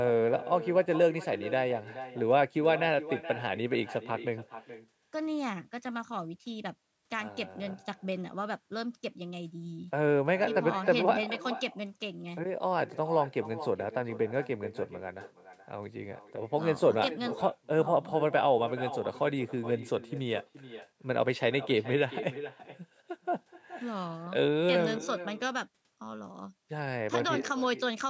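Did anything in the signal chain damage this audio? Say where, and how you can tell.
Yes, at the call-processing stage: echo with no canceller runs throughout the speech, each phrase shadowed by a thinner copy about 14 dB down arriving around 0.4 s later. The far end's loudspeaker feeds its microphone, and nothing subtracts that returning signal.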